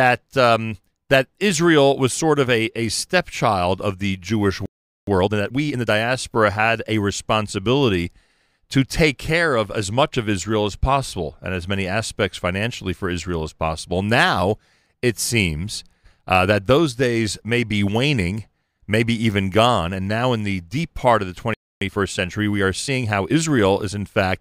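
At 4.66 s the speech halts for about 0.42 s, a playback stall, likely from the player running dry or a blocked thread. It then resumes. From 5.07 to 5.89 s, time-compressed catch-up rushes it at 1.5 times speed with normal pitch, unlike a sped-up tape's raised pitch. After "deep part of the", a second stall silences 21.54 to 21.81 s, followed by milder 1.15-times catch-up until 23.63 s.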